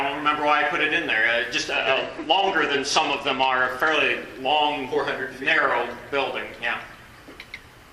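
From 1.72 s to 3.96 s the sound goes dull and gritty, the signature of a Bluetooth SBC bit pool drop. When a congested link forces the sender to cut the bit pool, the encoder runs out of bits for the highest sub-bands and quantises the remaining ones coarsely. Here the treble thins out and a rough, grainy noise sits on the signal, consistent with a fall from a bit pool near 31 to one near 13, roughly 94 kbps, before full quality returns.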